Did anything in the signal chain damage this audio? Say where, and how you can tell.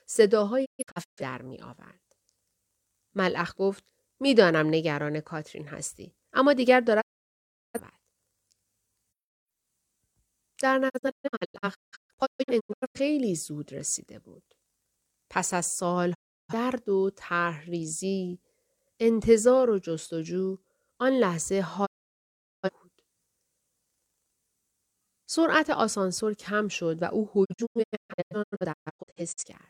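Yes: the speech fades to silence at 0.64–1.22, 7.00–7.80, 10.88–13.00, 16.13–16.54, 21.85–22.70 and 27.44–29.48 s, broken into short holes in the first, third and last. This is a digital broadcast dropout, where the receiver muted on failed frames.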